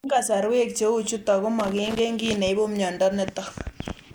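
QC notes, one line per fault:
1.60–1.99 s, loose connector crackle: between "chutok ko" and "kiy neipu" the speech is chopped as a worn contact rapidly makes and breaks, giving an irregular scratchy burst. The waveform shows ragged gaps and spikes, and the spectrogram shows scattered broadband vertical streaks.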